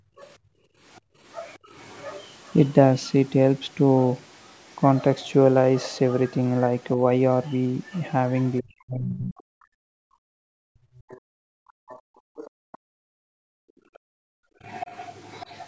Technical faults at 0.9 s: background gated by the echo canceller; other side's voice leaking through

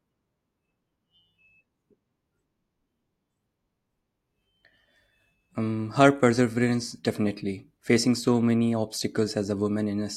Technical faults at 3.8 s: none

